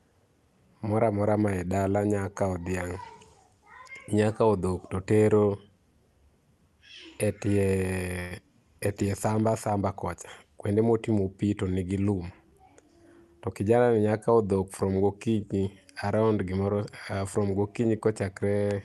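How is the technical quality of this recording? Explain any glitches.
Two brief glitches affect the speech, both from the call's delivery rather than the source, and the band tops out near 12 kHz as a call codec path would leave it.

From 8.19 to 8.33 s the sound briefly smears into a fading buzz or hiss, then resumes exactly where it left off. This is a call audio freeze. Packets likely stalled in transit, emptying the jitter buffer, so the receiver stretched the last sound for about 112 ms, inserting a gap without losing anything.

From 12.16 to 13.05 s, right after "kuonde motimo pii tonigi", the speech sounds hurried but keeps its pitch, running at 112% speed. This is a jitter buffer speed-up: with surplus audio queued, the receiver trimmed tiny pitch-period slices repeatedly, removing roughly a tenth of a second to cut delay.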